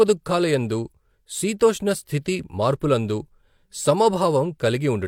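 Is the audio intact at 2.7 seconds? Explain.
Yes, the audio is intact at 2.7 seconds, with no dropout, click, distortion or other fault at that moment.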